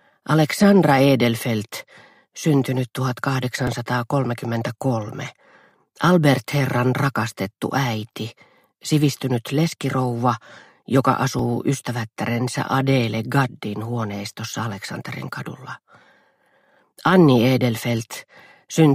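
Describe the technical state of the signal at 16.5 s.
At 16.5 s the signal is intact, with no technical fault to be heard at that moment.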